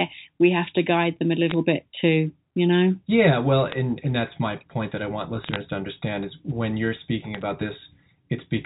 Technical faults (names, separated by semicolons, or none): bit errors on a digital phone line